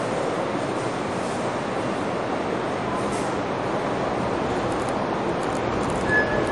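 The sound appears to be low-bitrate audio saved at a high bitrate: it was likely squeezed through a low-rate MP3 encode, around 48 kbit/s, then re-saved as a much larger MP3, which fits a 192 kbit/s file. The second pass cannot recover what the first discarded. From start to finish, nothing remains above about 11.3 kHz, so the top end is dull and airless, and the first encoding's smeared, swirly artefacts stay baked into the sound.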